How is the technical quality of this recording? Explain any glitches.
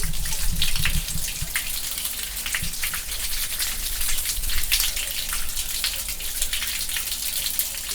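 One glitch stands out. From 2.24 to 4.79 s the audio turns muffled and rough. That is a call bitrate drop, consistent with the encoder falling from about 64 to 16 kbps, coarsening detail and trimming highs.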